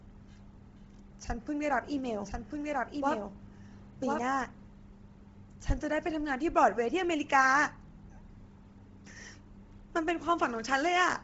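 Throughout, the speech has a breathy, grainy edge, and nothing comes through above about 7.7 kHz. This is likely heavy Bluetooth LC3 compression, with the upper spectrum zeroed and noise-filled in a way that fits a low bitrate near 24 kbps.

From 1.85 s to 4.67 s, a second full-band copy of the speech runs about a second behind, roughly 5 dB quieter, with no room colour, and it cuts in and out abruptly. This is likely a doubled audio track, mixed in from a slower path.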